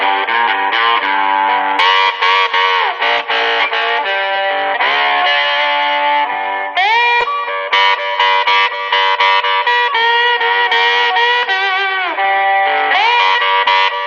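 Corrupt frames are decoded at 3.17–3.20 s, 4.35 s and 7.20–7.24 s. Damaged compressed data was played anyway, throwing energy onto wrong frequencies. Each is a brief squeak or noise burst, near full scale at 3.2 and 7.2 s and quieter at 4.35 s. A dropout would leave a gap instead.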